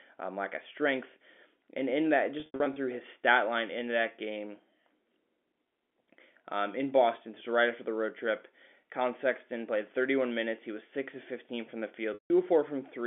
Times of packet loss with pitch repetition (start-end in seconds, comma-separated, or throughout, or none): 2.40-2.76, 12.14-12.30